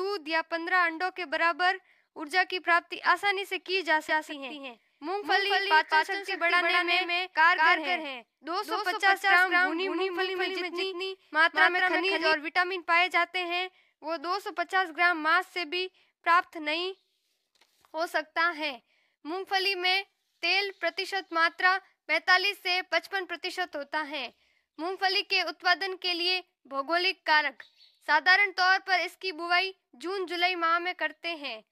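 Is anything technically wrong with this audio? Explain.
Yes. From 4.09 to 12.33 s there's a doubled audio track: an equally loud copy trails about a fifth of a second behind, likely from a second, slower capture path.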